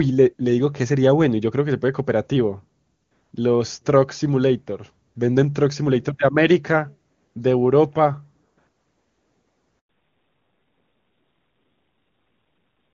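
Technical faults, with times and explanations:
9.79 to 9.89 s, handover gap: the call is passed from one network to another, and for about 100 ms no speech frames reach the receiver. The sound fades out within a few tens of milliseconds and leaves a short hole of silence until the new link starts delivering audio. Whatever was said inside that tenth of a second is simply gone, not muffled or garbled.
9.89 s to the end, fallback to narrowband: once the new link is up, the call is no longer carried by the HD Voice AMR wideband codec, whose earlier sound was clean enough to fit its top rate. It continues on an older narrowband codec at a low rate, plausibly around 7.4 kbit/s. Nothing above 4 kHz survives, so the speech turns duller, boxier and rougher.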